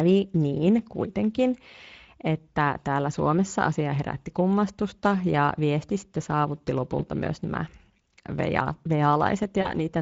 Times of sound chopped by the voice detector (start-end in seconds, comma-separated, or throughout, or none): none